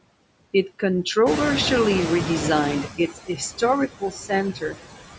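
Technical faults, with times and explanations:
Throughout, noise suppressor artifacts: The suppressor is pulling down every band it judges to be steady noise, frame by frame, by about 19 dB. The background therefore dips in the gaps and swells back under the speech.
1.26 to 2.89 s, noise suppressor catching up: The room noise jumps by about 14 dB around one and a half seconds, and the suppressor's noise estimate lags behind it. For roughly 1.63 s the louder background comes through with only about 12 dB of reduction, sitting about 7 dB under the speech. It then sinks as the estimate catches up. The result is a surge of background noise that fades away over about 1.6 s.
2.88 to 3.41 s, 3.88 to 4.32 s and 4.53 to 4.78 s, speech cut by the noise suppressor: In each of these stretches the suppressor mistakes parts of the speech for noise. About a fifth of a second of each is turned down along with the background, by about 18, 20 and 17 dB at the deepest. 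The affected speech sounds swallowed or faint.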